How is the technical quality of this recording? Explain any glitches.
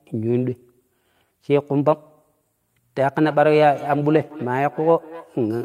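One fault affects the recording. From 3.21 s to the end, feedback echo between two devices: a second device replays this microphone's speech, which is picked up again, repeating roughly every third of a second at about 18 dB below the speech, thin and ringing.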